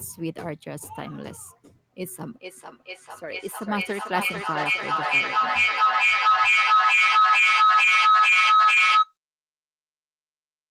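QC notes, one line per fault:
2.23–9.16 s, feedback howl: a tone near 1.5 kHz gains level on each trip around a microphone-to-loudspeaker loop. It pulses roughly every 0.4 s, matching the loop's delay. It peaks about 12 dB above the speech before ending at 9.16 s.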